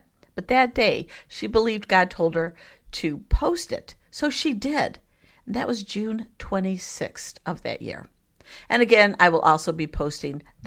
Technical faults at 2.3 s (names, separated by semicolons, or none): lost packet rebuilt from error correction